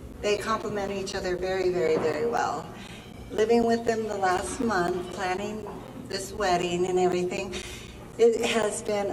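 From about 0.13 s right through to 8.89 s there's a steady run of periodic USB or driver dropouts, one every 0.25 s, so around forty in all. Each time, something seems to stall the bus or the audio driver for roughly 10 ms, and that slice of sound is simply replaced by silence. You hear it as an evenly spaced ticking or popping, four a second, riding on the signal wherever there's sound to interrupt.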